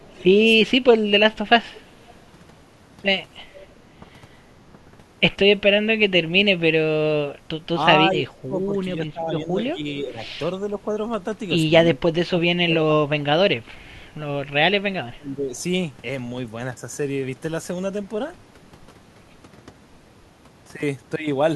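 Speech, marred by two recurring call-path faults. Echo leak appears as faint scraps of a delayed copy of the speech at 0.00–0.24 s, 1.74–1.81 s, 3.55–3.66 s and 10.26–10.31 s, each trailing the original by 370 ms, at about 30 dB below it (about 35 dB on the last). A fixed 370 ms lag marks it as a discrete repeat, not room reverberation. It is likely caused by a far-end loudspeaker echo that the echo canceller failed to remove. Speech suppressed in double talk shows as level dips at 0.56–0.84 s (roughly 25 dB deep), 4.00–4.78 s (only about 5 dB, briefly), 7.33–10.91 s (roughly 20 dB, around 1.5 s in total) and 11.90–15.55 s (roughly 25 dB, around 1.5 s in total). Unlike a network dropout, the sound is ducked in uneven pieces over these stretches rather than cut cleanly. This is likely an echo canceller turning down the talker while both sides spoke.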